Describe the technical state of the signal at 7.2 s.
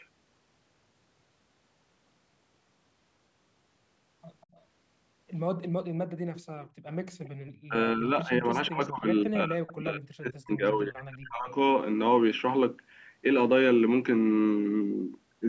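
From 7.23 to 7.29 s a faint copy of the speech repeats 193 ms late. This is an echo leak, likely escaping a loudspeaker's echo canceller, and it is a discrete repeat rather than reverb's smooth tail.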